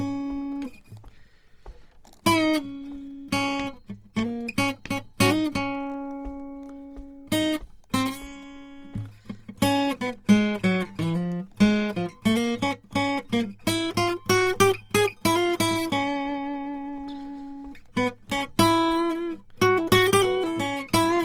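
From start to finish the music sounds rough and grainy, with tones taking on a noisy, sandpapery texture rather than the swirling holes of MP3, while the top end still reaches to about 20.4 kHz. This is Opus compression in its CELT music mode, and likely at a low rate, roughly 24 kbps. Short of bits, the encoder kept each band's energy but filled the fine detail with folded copies of lower bands or noise.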